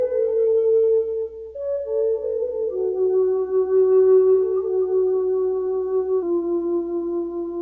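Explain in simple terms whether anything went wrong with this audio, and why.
From 6.23 s to the end at 7.61 s, the audio slows to about 0.92 times normal speed and drops about 1.5 semitones in pitch. That is a wrong sample rate, consistent with 24 kHz material played back at 22 kHz without conversion.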